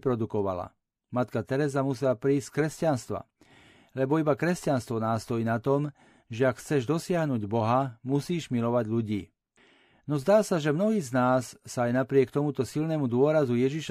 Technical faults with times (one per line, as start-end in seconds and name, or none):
11.73 dropped samples